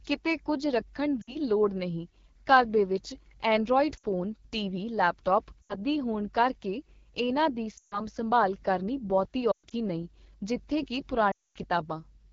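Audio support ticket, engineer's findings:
AMR wideband (HD Voice) codec, whole clip. Speech rough and raspy throughout. Band-limited vocal tract model plus noise-filled top band, clearly strained. Points to one of the two lowest modes, consistent with 8.85 kbit/s. Audible artefacts, not subtle.

Lost AMR speech frames at 1.22–1.36, 3.97–4.05, 5.63–5.76, 7.77–8.01, 9.51–9.73 and 11.32–11.58 s. Sound drops to near silence within two frames. Rough, weak return after each. Decoder concealment repeating last good parameters at falling gain. Gaps fit runs of 20 ms frames, longest near 11.3 s; 9.5 s losses scattered.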